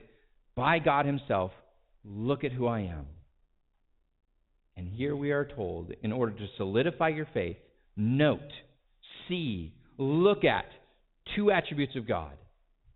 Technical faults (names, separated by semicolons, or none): packet loss with pitch repetition